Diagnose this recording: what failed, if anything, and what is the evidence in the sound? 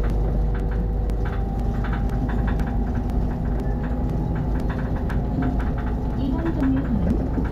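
Periodic USB or driver dropouts run from 0.1 s to 7.11 s, one every 0.5 s, each a tick where a couple of milliseconds of audio goes silent. This is a driver or buffer fault: a background task repeatedly stalls the USB bus or audio driver, so samples go missing at this fixed interval.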